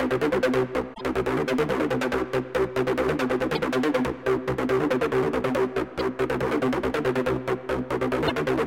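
Damaged data in a compressed stream appears four times: 0.93 to 1.01 s, 3.55 to 3.59 s, 5.99 to 6.01 s and 8.24 to 8.31 s. At each point the encoded bytes are corrupt, so the decoder misreads the affected frames, loses frame sync and has to hunt for the next valid header before output recovers. Each event is a short disruption, lasting between about 24 and 82 ms, that cuts across the sound.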